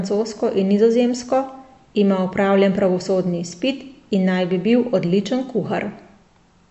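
Throughout the speech, the treble stops abruptly at 7.9 kHz, and quieter detail sounds watery and swirly, with metallic sibilants and smeared onsets. The likely cause is MP3 compression at a bitrate near 47 kbps. A spectrogram shows a flat ceiling above patchy, flickering blocks.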